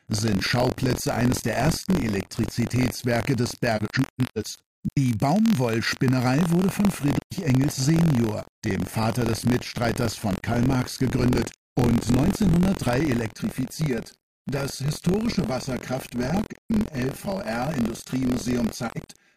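Buffer tearing runs through the whole recording as a steady robotic rattle at 43.1 Hz, present only when there is signal. That rate fits a 1024-sample ring buffer whose writer and reader have drifted until they cross inside every period. A small slice of each buffer, around a twentieth, still holds audio from roughly 50 ms earlier, with hard joins on both sides. AAC frame loss with muting opens soft-edged holes at 3.77 to 4.97 s (725.3 ms lost, scattered across about 1.2 s, longest gap roughly 150 ms), 7.19 to 7.33 s (128 ms), 10.34 to 10.43 s (85.3 ms), 16.44 to 16.89 s (256 ms within about 430 ms, longest gap roughly 150 ms), and 18.87 to 19.09 s (170.7 ms within about 300 ms, longest gap roughly 100 ms). The decoder zeroed the spectrum of the missing frames, so the overlapping windows fade the sound down and back up. Channel delay with comb filtering makes the audio hollow and phasey from 13.32 s to the end. 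One channel lags the other by roughly 5 ms, and the two are summed to mono, so material common to both cancels at fixed, evenly spaced frequencies. The first notch sits near 100 Hz, and further notches repeat at about 200 Hz intervals.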